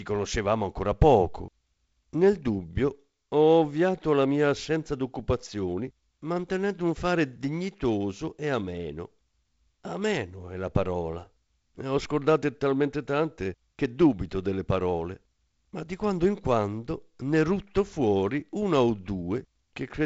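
No technical faults turn up anywhere in this speech clip. It has passed through G.722 wideband telephone coding, with nothing heard above about 7.7 kHz and a light coding noise that fits the 48 kbit/s mode.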